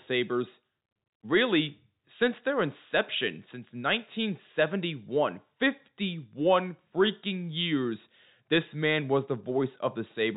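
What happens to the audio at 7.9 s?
Nothing goes wrong at 7.9 s; the speech carries on intact through that moment, still in the same narrow telephone band as the G.711 coding around it.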